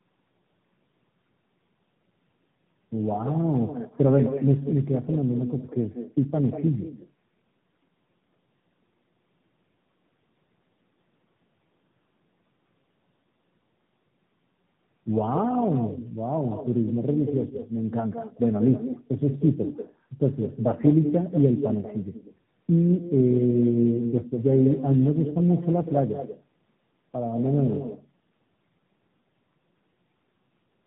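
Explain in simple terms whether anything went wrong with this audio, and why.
Two things went wrong, and both last the whole recording from start to finish.

First, there's echo with no canceller. On the far end, the call was playing through a loudspeaker, the microphone there caught it, and nothing filtered it out. So the talker's speech comes back about a fifth of a second later as a quieter, thinner copy trailing right behind it. That's the shadow you hear on the talker's voice.

Second, there's tandem speech coding. The call passed through more than one speech codec, so it was squeezed, unpacked and squeezed again at each hand-off. Each step works on damage the previous one already did, and it stacks up. The speech sounds rough, muffled and a bit warbly, and nothing above 3.8 kHz survives, which is why it has that dull, boxy phone quality.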